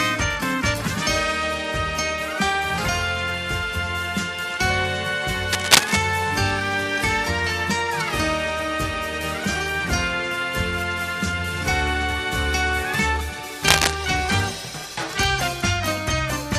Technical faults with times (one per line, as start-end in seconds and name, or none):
5.52-5.97 cable scratch noise
13.62-13.95 cable scratch noise